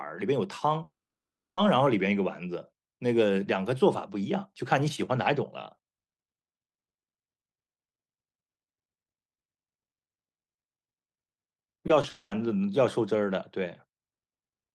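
A speech recording with two kinds of network fault. From 0.83 to 1.59 s the sound stops: a short fading continuation gives way to about 0.66 s of silence, and when the audio returns the missing stretch is simply gone. A second gap from 12.09 to 12.33 s is bridged almost entirely by smeared fill. Both are most likely a long network dropout. Separately, at 11.87 to 11.91 s and 12.01 to 12.05 s, short concealed packet loss leaves brief smears or wobbles where about 20 ms of audio was synthesised. Unlike the dropouts, these never fall silent and blend straight back into the real signal.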